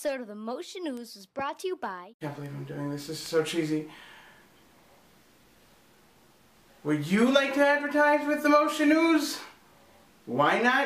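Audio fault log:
0.97 s, 2.46 s, 3.26 s: bit error spikes. A flipped bit in memory or on a digital link throws one to three consecutive samples off by a power of two before they snap back, so each is a sharp, broadband tick unrelated to the sound, peaking around -26, -26 and -20 dBFS.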